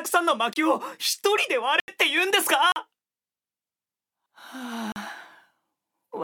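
The audio drops out to dead digital silence four times: at 0.53 s for about 27 ms, from 1.80 to 1.88 s, from 2.72 to 2.76 s, and from 4.92 to 4.96 s. These are blocks of digital silence, stretches of samples zeroed out, typically when the output buffer isn't filled in time. The sound cuts in and out with no fade, and the 80 ms one comes across as a short hole.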